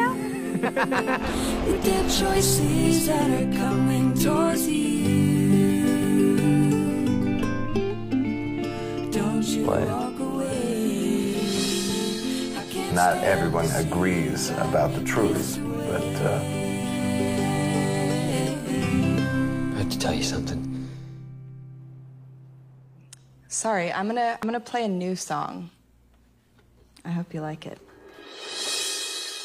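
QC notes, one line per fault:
3.67–3.73 s: damaged data in a compressed stream. Corrupted bytes make the decoder misread frames and lose sync, producing a brief glitch before it locks onto the next frame header.
24.43 s: damaged data in a compressed stream. A momentary blip where a corrupted frame is rejected and the decoder searches for valid sync before resuming normal decoding.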